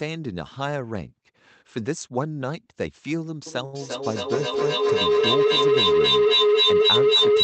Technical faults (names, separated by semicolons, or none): feedback howl; short stall from a late packet